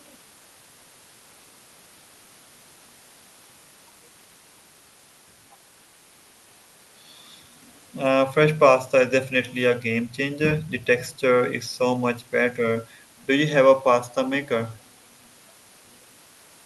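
No faults are audible in the speech, and the top end rolling off at about 12 kHz is simply what the call codec path does to it.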